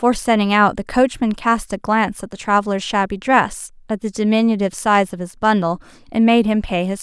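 Speech recording with no audible technical faults anywhere.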